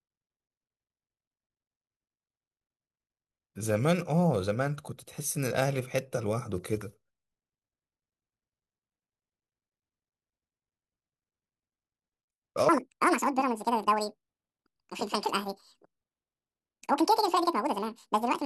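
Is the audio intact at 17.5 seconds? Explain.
No. From 12.69 s to the end, the audio is read two samples at a time (double speed): sample pairs become single frames, so the speech runs at 2x speed, an octave (12 semitones) higher. A spectrogram shows harmonics spread twice as wide. The waveform looks squeezed in time.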